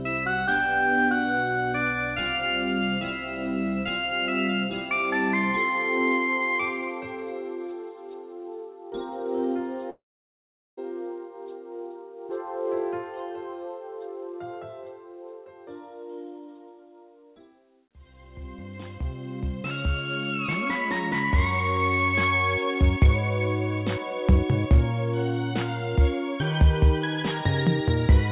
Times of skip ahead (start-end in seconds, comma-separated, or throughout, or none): none